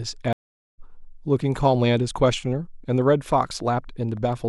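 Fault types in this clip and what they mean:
Stream reconnect: The connection dropped and decoding restarted mid-stream. The speech goes silent for 0.41 s at 0.33 s and resumes about half a second later.
Train of clicks: A handful of irregular clicks, about 2.6 per second and near speech level, from 3.02 to 4.18 s. Interference is the likely cause.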